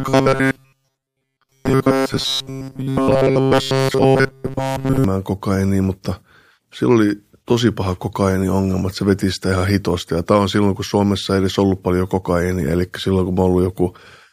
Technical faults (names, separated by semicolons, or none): robotic sound from repeated short buffers